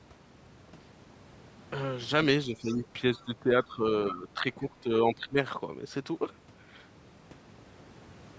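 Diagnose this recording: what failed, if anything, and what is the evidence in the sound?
Call processing failed here: likely speech suppressed in double talk. The speech dips about 10 dB at 2.46–2.83, 3.25–3.86, 4.11–4.44 and 5.15–5.36 s, and about 15 dB at 4.6–4.91 s. Unlike steady compressor pumping, the dips follow overlapping far-end speech.

Also in call processing, the other side's voice leaking through is the likely cause of faint fragments of a second voice at 2.7–2.76, 3.15–3.24 and 4.28–4.34 s, about 25 to 35 dB below the talker. This is residual echo, not a delayed repeat of the talker.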